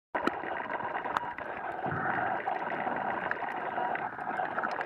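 Nothing is technically wrong with this audio, and there are no faults to place in time or trace to a cause.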